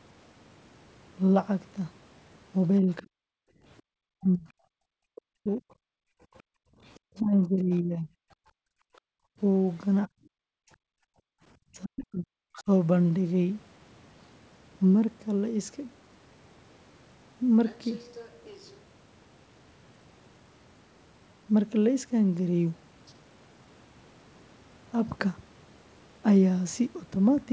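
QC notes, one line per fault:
3.03–6.69 s and 8.39–11.39 s, background gated by the echo canceller: the room tone sinks by up to about 40 dB in dips, around a second and a half of dropouts in each stretch, then returns. The canceller clamps the microphone while the loudspeaker is active.
3.95–8.11 s and 10.61–12.68 s, speech suppressed in double talk: the talker's speech dips by up to about 40 dB, roughly a second and a half in the first stretch and under a second in the second. This is likely the canceller treating the talker as echo while both sides speak.
6.38–7.78 s and 12.55–12.63 s, other side's voice leaking through: a faint second voice is heard under the talker, about 30 dB down in the first stretch and a brief scrap about 25 dB down in the second. This is likely loudspeaker sound the canceller left in the microphone signal.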